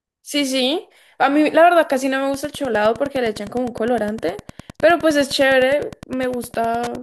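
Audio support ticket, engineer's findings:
Wi-Fi interference: nearby Wi-Fi radio coupling into the audio circuit, beacon rectified. From 2.29 s to clip end, steady ticking about ten times a second (102.4 ms period) under the speech, roughly 20 dB below it.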